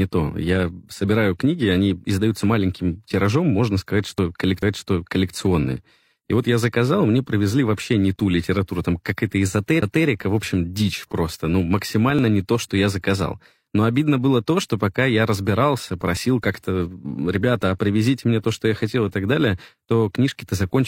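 Tiny skips in the speech at 4.18–4.21 s, 8.16–8.19 s (between "мне привезли вообще не" and "литературу там"), 12.19–12.22 s (between "общем дичь просто ну" and "не то что я") and 16.17–16.21 s (after "что пока я разбирался") come from overlap between stream segments. Each time, about 30 to 40 ms of audio is cut where 4 s segments meet, and the waveform jumps. The strict 4 s spacing sets them apart from a CD skip.

The CD skip at 9.81 s is a mute of about 15 ms, after which playback resumes from a different point on the disc. It is a single event, unrelated to the 4 s grid, and it comes from the laser jumping to another turn of the spiral rather than from a segment join.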